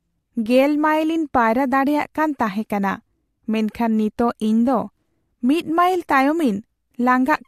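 No technical faults can be heard in the recording. There is nothing to place on the timeline.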